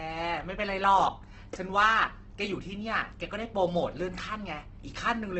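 Opus compression runs through the whole clip: the speech sounds rough and grainy, with vowel tones smeared into a noisy texture rather than the swirling holes of MP3-style damage. Nothing is present above 8.2 kHz, so the top end is sealed off. This is likely heavy Opus coding in its music-oriented CELT mode, which fits a rate of about 12 kbps. With so few bits, the encoder fills the upper bands with folded or noise-like content instead of leaving them empty.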